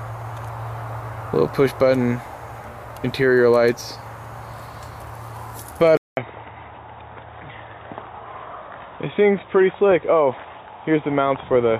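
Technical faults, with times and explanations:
5.97 s to 11.79 s: input switched to a poorer device. After a 200 ms gap the sound goes dull and boxy, with nothing above 3.8 kHz and faint new background noise well below it, but no level jump. The recording likely moved to a narrower-band mic.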